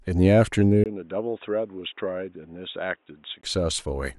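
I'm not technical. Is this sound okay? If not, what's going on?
No, not quite. At about 0.84 s there's a tiny gap, about 20 ms, and then the speech suddenly turns dull and boxy, drops noticeably in loudness, and picks up a faint background noise. Nothing above about 3.8 kHz gets through. That lasts until about 3.43 s, when the fuller sound comes back. This is most likely an input switched to a poorer device: the recording jumped to a poorer microphone or headset for a few seconds, then switched back.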